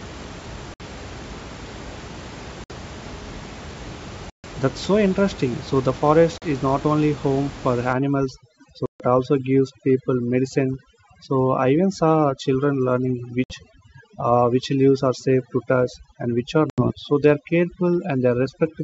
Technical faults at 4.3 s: packet loss on an ADPCM call

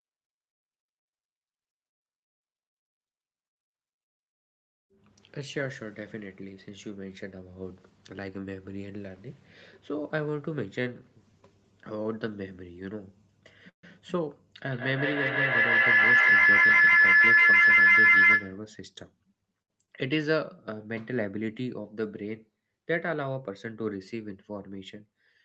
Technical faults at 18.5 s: feedback howl

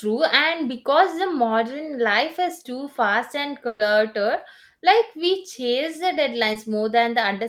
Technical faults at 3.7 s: burst of packet loss

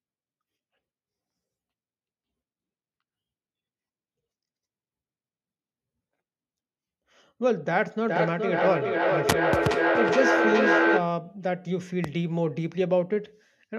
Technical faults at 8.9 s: feedback echo between two devices

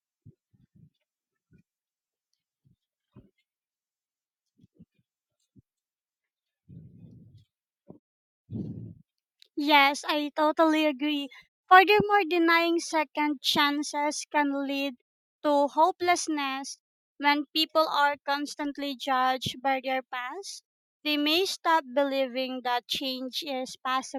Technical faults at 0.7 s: none

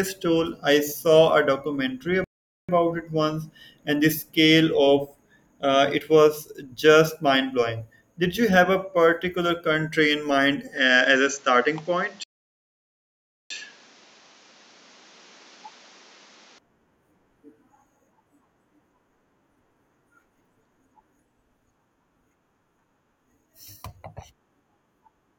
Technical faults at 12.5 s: input switched to a poorer device; playback stall

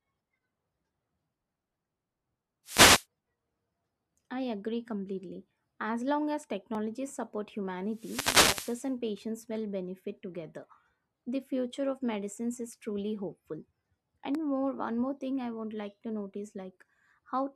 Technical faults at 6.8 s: block of digital silence

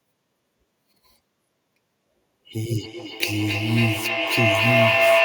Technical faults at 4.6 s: feedback howl

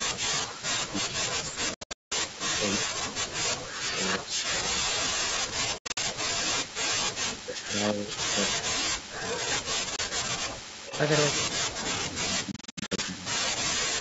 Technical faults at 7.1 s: speech suppressed in double talk; echo leak

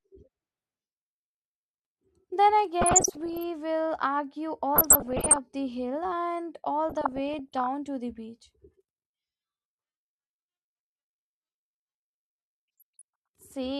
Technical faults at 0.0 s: none

